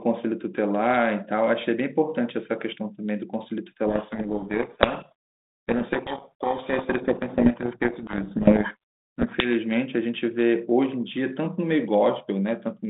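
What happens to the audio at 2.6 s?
At 2.6 s the speech is intact, carried through the 200 Hz to 3.7 kHz telephone band of the 32 kbit/s G.726 line with no fault at that moment.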